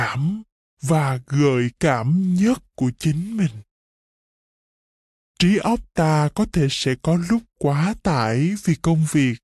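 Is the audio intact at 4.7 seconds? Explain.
No, 4.7 s sits inside a wrong sample rate fault that runs through the whole clip. The speech plays at 0.726 times its proper speed, about 5.5 semitones low, so it sounds slow and deep. That fits 44.1 kHz material played back at 32 kHz without conversion.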